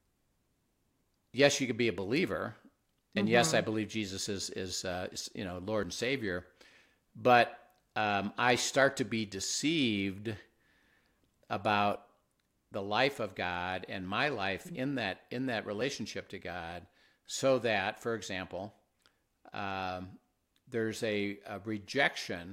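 A speech recording with two short skips where audio goes missing between chunks, at 5.83 s just after "uh is you know" and at 15.81 s just after "in that in that". Each jump is only about 20 ms, and the sound on either side is butted together with no silence. A dropout would leave an audible gap. The exact 10-second spacing points to the likely cause: a recorder handling audio in 10 s chunks and losing a sliver at each handover.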